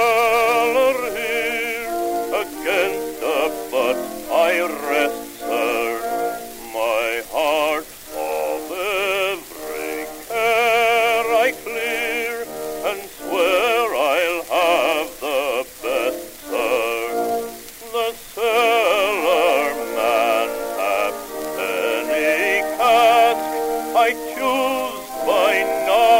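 A gritty, inharmonic fizz rides on the sound from start to finish, growing with loud and bright passages and sitting roughly 25 dB below them. This is crude rate conversion: samples were repeated by nearest-neighbour picking without filtering, which fits a change from 44.1 kHz to 48 kHz.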